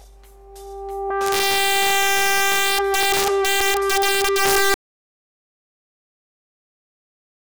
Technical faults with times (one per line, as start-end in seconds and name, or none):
0.00-7.41 integer overflow
4.74-7.41 audio dropout to silence